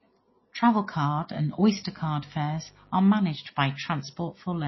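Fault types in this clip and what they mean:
MP3 compression: The encoder likely ran short of bits, which fits a low bitrate of about 24 kbps, so it dropped frequency lines it judged unimportant and cut the treble entirely. Throughout the speech nothing is present above 5.8 kHz, which leaves the sound dull, and the damage is plainly audible. Weak components switch on and off from frame to frame, giving the speech a watery, swirling quality with smeared attacks.
mains buzz: Interference from the 50 Hz mains supply got into the signal path, for instance through a dimmer, a rectifier or a missing shield, adding sharp switching spikes twice in every mains cycle. These spikes produce a buzz built on 50 Hz and its harmonics. In this clip it appears from 1.64 to 3.15 s, sitting roughly 35 dB below the speech, then stops.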